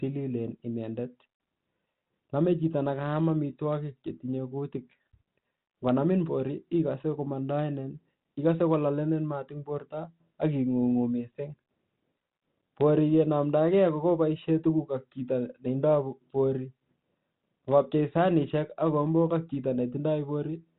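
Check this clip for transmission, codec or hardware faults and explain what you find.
No transmission, codec or hardware faults turn up in the speech, which comes through a G.726 ADPCM path at 32 kbit/s, limited to the band below 4 kHz and carrying only the light coding texture expected at that rate.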